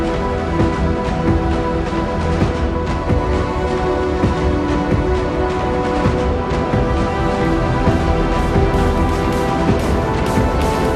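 From the start the sound is dull and lacks its top end, with a gurgling, granular roughness on everything that remains. This is the sound of MP2 compression, most likely at a rate that fits around 80 kbps. The codec divides the signal into 32 sub-bands and shares out a limited bit budget among them. The upper bands lose out and switch off or flicker, and the lower ones are quantised coarsely enough to grain audibly.

Four short bursts of burbling then cut across the audio, from 2.25 to 2.49 s, 4.49 to 4.57 s, 7.43 to 7.51 s and 10.19 to 10.51 s. This is DAB burbling. Bit errors, at a rate of roughly 0.15 to 0.3 percent, slip past the error correction into the MP2 stream. Corrupted samples put short blips of noise into single sub-bands, and corrupted scale factors, where they get through, make sub-bands jump in level for up to a frame, which gives the burbling heard at each point.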